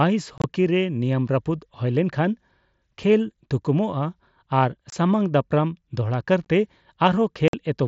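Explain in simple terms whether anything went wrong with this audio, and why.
Short chunks of speech drop out at 0.38–0.44 s, 4.90–4.93 s, 6.45 s and 7.48–7.54 s. This is unconcealed Bluetooth headset packet loss: bits of sound between headset and phone went missing and silence took their place. Unlike concealed loss, nothing smooths the gaps, so they cut in and out abruptly.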